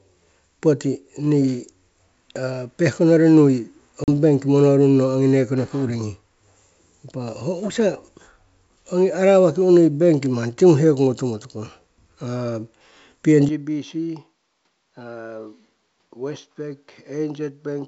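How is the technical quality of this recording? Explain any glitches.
Two glitches stand out in this speech recording, heard through G.722 wideband telephone coding that adds little or no audible damage of its own.

Packet loss on an ADPCM call, at 4.04 to 4.08 s: a 40 ms hard-edged gap, about two packets' worth, is filled with silence. The decoder's adaptive predictor and step size lose track of the sender's, so the speech resumes briefly slightly distorted before settling.

Input switched to a poorer device, from 13.49 s to the end: with no gap at the switch, the sound suddenly turns duller and drops by about 10 dB. Nothing comes through above 6.2 kHz, and a new noise floor sits roughly 45 dB below the speech. The likely cause is the system changing to a different microphone or headset profile partway through the recording.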